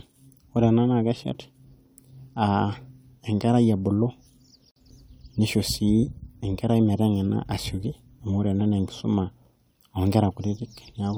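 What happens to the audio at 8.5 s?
Nothing goes wrong at 8.5 s; the speech continues intact through that moment with no dropout, click or distortion.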